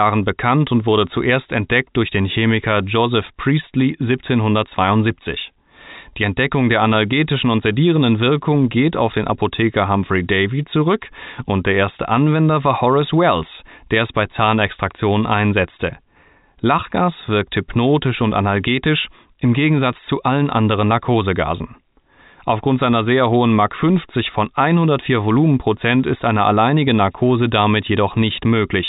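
No technical faults are audible.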